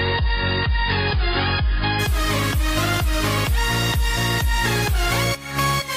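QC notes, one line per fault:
0.0–2.0 s, adaptive stream starting at a low bitrate: the opening sounds dull with nothing above about 5.1 kHz and stronger codec artefacts, which fits a player starting on a 16 kbit/s AAC rung, then at 2.0 s it jumps cleanly to fuller treble, like a 96 kbit/s version.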